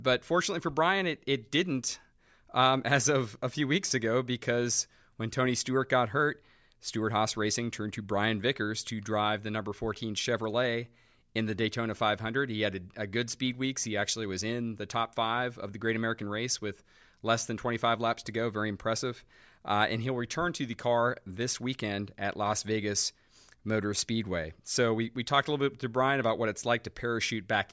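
No technical faults can be heard anywhere in the speech.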